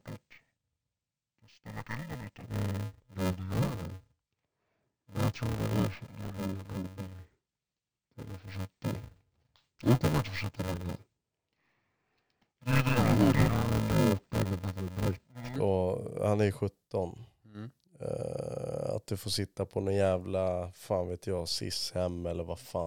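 From 0.0 to 15.56 s, interleaved audio read as planar: 2.67 ms blocks are split into half-speed halves, giving dull, robotic speech buzzing at 375 Hz, which fits a 128-sample block.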